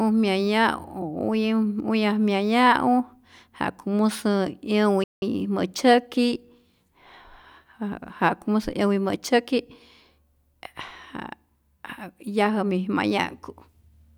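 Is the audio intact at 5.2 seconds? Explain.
No. The player likely ran short of data or had its output thread blocked, causing a playback stall from 5.04 to 5.22 s. The speech drops out mid-flow into 182 ms of silence before the sound picks up again.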